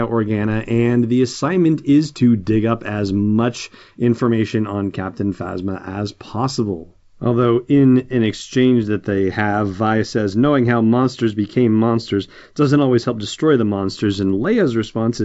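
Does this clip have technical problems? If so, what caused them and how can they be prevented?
No, this speech clip has no technical problems to explain or prevent. It carries the marks of G.722 wideband telephone coding at 64 kbit/s, with nothing above about 7.7 kHz and at most a faint trace of the coding in the sound.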